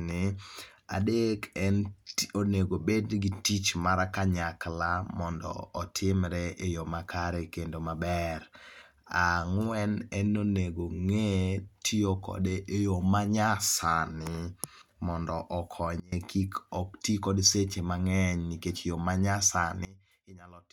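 At 16.00 s the speech and its background noise drop together by about 24 dB, returning at 16.12 s; at 19.85 s they fall by about 22 dB and stay down to the end. Both are sudden gain jumps, likely an unramped digital gain change.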